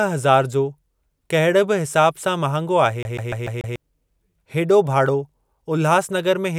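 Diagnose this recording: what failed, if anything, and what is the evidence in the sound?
From 3.03 s to 3.76 s the speech stutters: one fragment of about 146 ms plays five times in a row, each pass cut off by a brief mute before it starts again, giving a quick, perfectly even machine-gun repeat. The failure sits at the playback stage, a CD stuck on one turn. A scratch kicks the laser back one track at the same point every revolution, so the same short slice keeps returning until the player escapes.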